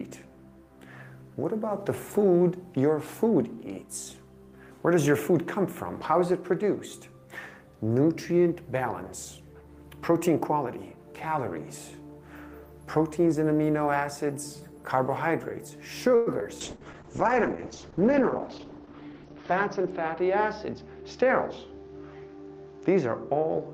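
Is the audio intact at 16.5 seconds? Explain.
No, not cleanly. Just before that point, from about 16.40 to 16.47 s, there is a brief smear with a wobble, where the sound seems held over rather than moving forward. That is short concealed packet loss, twice in a row, at 16.40–16.43 s and 16.43–16.47 s, each losing about 20 ms of audio. The decoder extended the preceding sound from its pitch or as shaped noise to cover each gap, then blended back into the real signal.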